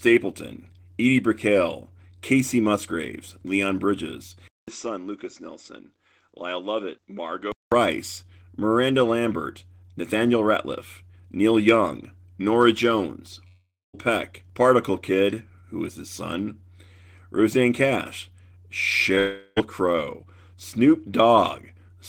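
From 4.48 to 7.72 s the speech turns dull and boxy, with nothing above 7.7 kHz, roughly 10 dB quieter, and with a faint new background noise far below it, after a 200 ms gap. This is likely an input switched to a poorer device, whose narrower band and own noise replace the original microphone.

At 13.47 s the last sound stretches into a fading buzz, then about a quarter second of silence before the audio resumes at 13.95 s with 0.46 s missing. That is likely a long network dropout, with the receiver extending what it last had.

From 19.15 to 19.18 s there is a brief smear where 20 ms never arrived. This is short concealed packet loss, and the gap was bridged by continuing the preceding sound.

Immediately after, from 19.18 to 19.58 s, what is likely a second long network dropout follows, lasting 0.38 s. This time the continued sound covers the whole gap with no silence before the audio returns.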